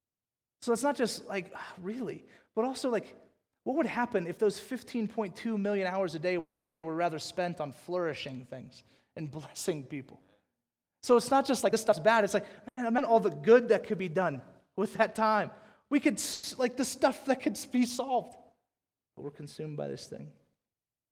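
At 6.39 s the speech halts in a call audio freeze lasting until 6.85 s. The last sound is carried on as a fading buzz that decays to silence for about 360 ms, and then the speech resumes exactly where it stopped. The likely cause is packets held up in transit so that the jitter buffer ran dry. Nothing is lost, but 440 ms of extra delay is inserted into the stream.

From 11.62 s to 12.23 s a jitter buffer speed-up compresses the audio. With a backlog in the buffer, the receiver repeatedly cut out short pitch-period-sized slices, taking out roughly a fifth of a second in total. Playback runs at 135% speed with the pitch unchanged, so this stretch sounds noticeably rushed while the voice keeps its normal register.

At 12.68 s to 12.79 s there is a short stall from a late packet. The expected packet had not arrived, so the receiver stretched the current sound for 90 ms until it did, then carried on from the same point. 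Nothing is missing. The sound is simply held too long, with a slight buzz or dip during the hold.

A skip ahead follows between 12.97 s and 13.00 s. Roughly 150 ms of speech is discarded while later audio was already queued, and the two sides are joined with only about 10 ms of fill. The result is an abrupt forward jump with no real gap.

From 13.39 s to 15.37 s a jitter buffer slow-down builds the reserve back up. The receiver repeated individual pitch periods and small pieces of pauses, adding 124 ms across the stretch. Playback drops to 94% speed at constant pitch, which gives a slightly drawn-out, lingering delivery.

A second call audio freeze occurs at 16.33 s to 16.45 s. This one is brief: the last sound is extended for 100 ms as a held, buzzy continuation without fading to silence, and then the speech picks up where it left off, adding 100 ms of delay.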